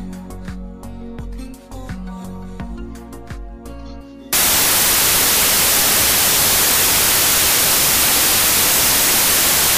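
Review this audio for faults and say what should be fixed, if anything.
From 4.33 s to the end, the audio turns into loud broadband noise with the original sound buried inside it, running 1.5 times fast and correspondingly higher in pitch. This is a wrong sample width fault: 16-bit integer samples are being read as packed 24-bit integers, so every three bytes form one sample and straddle two original ones. Only some of those values keep the real signal's top bits, and the 2:3 byte ratio produces the 1.5× speed-up. To prevent it, carry the sample format explicitly with the data and have the reader validate it before decoding.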